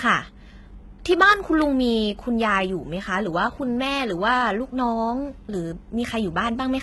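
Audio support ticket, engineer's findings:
HE-AAC compression, throughout the clip. Treble on this speech sounds synthesized rather than captured: s sounds gritty, metallic and lispy, with high-frequency texture not tracking the lower harmonics. Probable component: a low-bitrate HE-AAC encode, likely in the transmission or storage chain. Mechanism: only the lower band is coded, and the upper band is rebuilt by spectral band replication from copied lower content, so harmonics misalign across the crossover. Damage heavy, consistent with a bitrate around 16 kbps.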